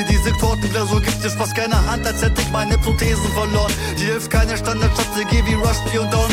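A single sharp tick at 2.05 s comes from a block of digital silence: for about 2.9 ms the audio drops abruptly to silence and returns with no fade. The gap fits a 128-sample buffer the program failed to fill in time.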